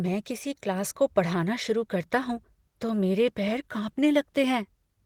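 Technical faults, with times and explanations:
Nothing stood out on listening to this speech clip.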